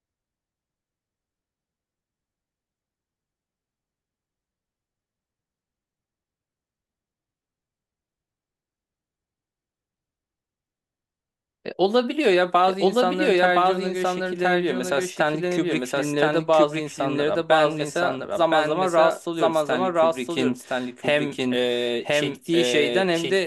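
A doubled audio track runs throughout: a full-band copy about a second behind, equally loud, likely a slower capture path, and without echo's decay.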